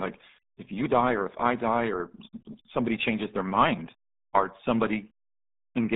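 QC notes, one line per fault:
Throughout: RealAudio 14.4 codec. The speech is muffled and gargly, with nothing above about 3.9 kHz and the band held roughly between 200 Hz and 3.7 kHz. This fits an 8 kbit/s RealAudio 1 stream. At that rate the coder discards detail and heavily damages consonants.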